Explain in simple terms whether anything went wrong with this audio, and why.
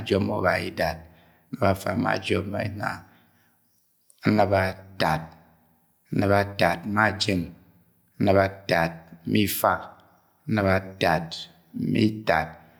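No audible technical faults here.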